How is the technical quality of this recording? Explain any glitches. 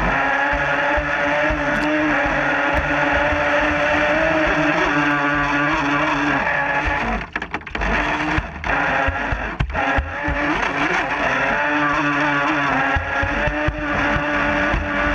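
The recording has one fault. From 2.77 to 5.11 s there is a doubled audio track: a full-band copy trails roughly 0.4 s behind, about 5 dB quieter, starting and stopping abruptly, likely from a second, slower capture path.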